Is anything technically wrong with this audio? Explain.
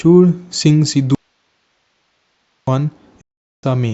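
Yes. From 1.15 to 2.67 s the speech cuts out abruptly, leaving only hiss roughly 50 dB down for about 1.5 s. This is an audio dropout to a faint residue, likely a lost signal while the path stayed live. From 3.21 to 3.64 s the speech fades to silence within 3 ms for about 0.42 s. This is a digital broadcast dropout: the receiver muted after losing a run of frames.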